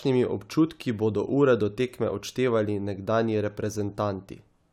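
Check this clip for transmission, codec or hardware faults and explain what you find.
No faults can be heard anywhere in this recording.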